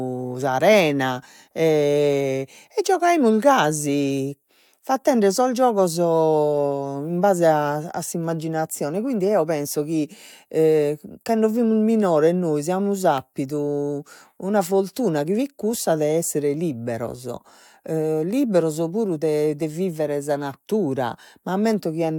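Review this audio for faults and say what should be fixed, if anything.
Nothing here needs fixing, as no faults turn up anywhere in the speech.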